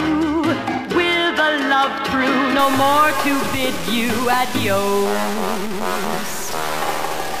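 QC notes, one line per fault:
2.59–7.4 s, low bit depth without dither: grainy distortion tracking the sound, error roughly 10 dB below signal; likely 4-bit truncation.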